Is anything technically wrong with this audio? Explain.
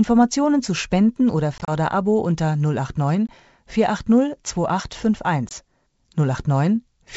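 Yes, there is packet loss on an ADPCM call, over the light upper-band hiss of G.722 wideband coding at what sounds like 64 kbit/s. At 1.58–1.72 s about 60 ms goes missing in scattered gaps (longest 30 ms), then 20 ms each at 3.27–3.30 s and 5.49–5.52 s. Lost packets become hard-edged silence, and the decoder's predictor and step size drift from the sender's, so speech returns slightly distorted before settling.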